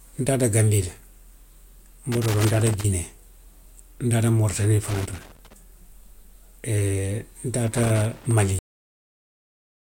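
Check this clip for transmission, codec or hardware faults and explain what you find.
Two kinds of fault are present: three bursts of loose connector crackle and a cut-off end.

Irregular scratching crackle breaks into the speech three times, from 2.12 to 2.85 s, from 4.88 to 5.53 s and from 7.67 to 8.31 s, each lasting roughly two-thirds of a second. This is loose connector crackle. A worn or dirty contact in the signal path keeps opening and closing as it shifts, chopping the audio into fragments, and any DC on the line adds pops to the scratching.

At 8.59 s the speech stops abruptly in the middle of a sound and falls straight to digital silence, with no natural decay, for the remaining 1.4 s or so. This is a cut-off end. The final stretch of audio was never written or played out, so the recording simply ends where the last completed buffer finished, rather than where the speech itself finished.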